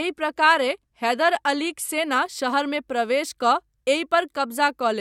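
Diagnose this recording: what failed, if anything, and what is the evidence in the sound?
An adaptive stream starting at a low bitrate, a network and playback fault: from 0.0 to 2.0 s the speech has nothing above 12.1 kHz and harsher codec artefacts, consistent with a low AAC rendition near 48 kbit/s. On a spectrogram, the band above 12.1 kHz fills in abruptly at 2.0 s, with no gap in the waveform, as the player switches to a richer rendition around 96 kbit/s.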